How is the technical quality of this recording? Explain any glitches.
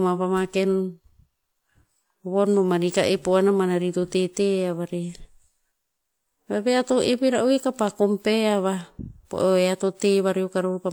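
The speech carries layered coding damage from start to finish, most likely transcoding between lossy codecs, with a WMA encode at around 96 kbit/s followed by HE-AAC at around 48 kbit/s. The second codec spends its bits re-coding the first codec's artefacts and adds its own, so both kinds of damage are heard together. A spectrogram shows nothing above 20.4 kHz and blurred, patchy high-frequency texture throughout.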